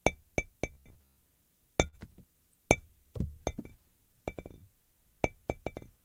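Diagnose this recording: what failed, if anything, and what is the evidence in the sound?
From 0.72 to 1.19 s the sound turns rigid and metallic, with a fixed buzz near 67 Hz running under it. This is robotic sound from repeated short buffers, likely at the driver or buffer stage. When fresh audio arrives too late, the last short block is replayed instead. A 67 Hz buzz implies a loop of about 15 ms. Most of this stretch is repeated material, so the real audio in between is skipped.

Between 1.87 and 1.99 s there is a burst of packet loss at the network stage. The receiver covers about 52 ms by extending the last sound and letting it decay, which is heard as a short held, fading tail. About 40 ms of the original audio never arrives. Another 12 ms is dropped as playback catches up, so the sound resumes slightly further along with that segment gone.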